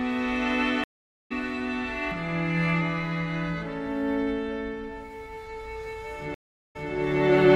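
Stream reconnects at 0.84–1.32 s and 6.34–6.91 s: the connection dropped, leaving blank gaps of 467 and 406 ms in the waveform. Audio then restarts about 0.4 s later, then 163 ms earlier (repeated).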